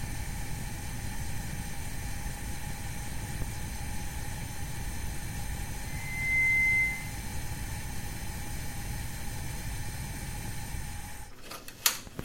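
Compressed frames skipped at 4.33 s interrupt this recording of everyday sounds: the audio lurches forward by roughly 40 ms, about two whole frames of 21.3 ms each, because those frames were either missing or rejected by the decoder as damaged. Loudspeaker feedback squeal follows from 5.85 to 7.22 s: a single 2.1 kHz tone swells over roughly half a second until it sits about 10 dB above the rest of the sound. A microphone was hearing the loudspeaker it fed, and at that frequency the loop gain exceeded one, so the tone kept reinforcing itself.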